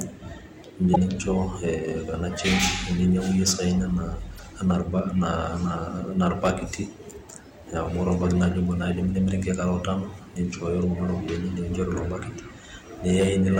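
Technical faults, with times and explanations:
0.93 to 0.97 s and 4.35 to 4.40 s, damaged data in a compressed stream: corrupted bytes upset the decoder, which loses sync briefly. Each spot becomes a short glitch in the speech.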